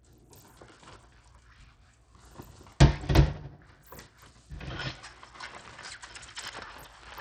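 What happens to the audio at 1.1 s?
At 1.1 s the audio carries the same damage it has from start to finish: Bluetooth SBC compression, most likely. The top end thins out and flickers, and a gritty, aliased noise rides on the sound. This fits the SBC coder running at a low bitrate, around 80 kbps. Its few fixed sub-bands share too small a bit budget, so the weaker high bands lose their bits and the remaining bands are quantised coarsely.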